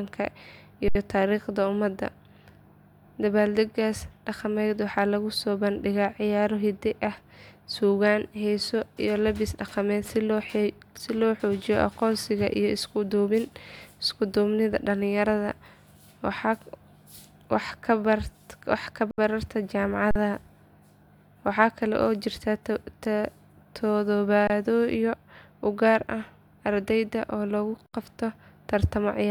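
Five short freezes are an underrun with held sample: the output ran dry and the converter held its last value, so the sound goes flat. At 0.88, 19.11, 20.11, 24.47 and 27.86 s (after "oo lagu"), gaps of roughly 70, 70, 46, 23 and 70 ms each resume softly, nothing skipped.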